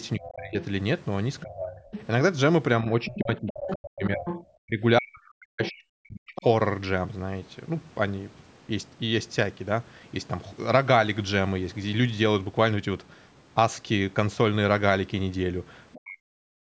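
Speech, band-limited to 8 kHz by call microphone processing, has speech suppressed in double talk at 0.16–1.83 s, 2.83–6.44 s and 15.94–16.6 s. The talker dips by as much as roughly 40 dB, which is likely an echo canceller ducking both voices, unlike a dropout that silences everything. The other side's voice is also leaking through at 0.22–2.05 s, 3.06–4.44 s and 5.63–6.43 s, about 10–15 dB below the speech. It is a second voice rather than a delayed copy of the talker, likely because the echo was left uncancelled.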